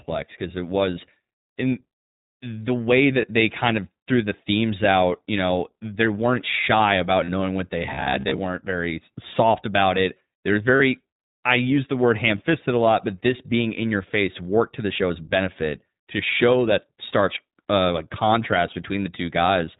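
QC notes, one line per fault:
Throughout: iLBC codec. The speech is band-limited to 4 kHz, with nothing above it. Each 20 ms frame is coded on its own at a rate that fits 15.2 kbps. The damage is plainly audible, a slightly rough, synthetic edge on the voice.
3.22 s, 7.24 to 7.30 s, 10.76 to 10.82 s, 12.38 to 12.42 s: lost iLBC frames. Short gaps of 20 to 40 ms are filled by repeating the last pitch cycle mixed with noise. Each one sounds like a brief held, buzzy vowel. The voice recovers almost immediately.
7.83 to 8.39 s: robotic sound from repeated short buffers. The voice turns into a rigid, metallic buzz at 66.8 Hz that still roughly tracks the speech. This is likely a 15 ms chunk being replayed while new audio arrives late, with about half the sound repeated.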